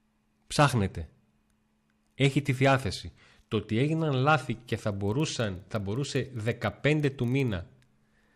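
A speech clip that, from 4.72 s onward, just after "ότι έγιναν λάθη", develops a filter restarted on every block fault lasting to the end: each block starts from a cleared filter state, so a small transient opens every one, producing a 25 Hz buzz that fits 40 ms blocks. Unlike mains hum, this buzz rises and falls with the speech level and vanishes in pauses. Unlike dropout clicks, it stays strictly periodic.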